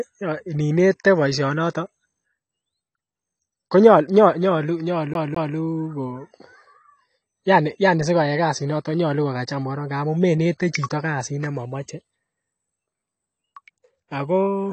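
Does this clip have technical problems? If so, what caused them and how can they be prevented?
Yes. Throughout the speech, sibilants sound dull and fizzy, with a warbling smear. This is likely AAC compression at a low bitrate, around 32 kbps. A spectrogram shows a hard ceiling at 8.6 kHz. Encoding at a higher bitrate prevents this.

From 5.14 to 5.56 s, a CD stuck on one turn repeats the same 0.21 s segment twice, with a short mute at each jump. The waveform shows identical blocks separated by brief gaps. Cleaning the disc or ripping with error-correcting software prevents it.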